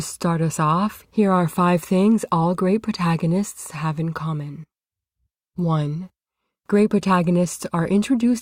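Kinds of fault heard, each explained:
No audible technical faults in this speech recording.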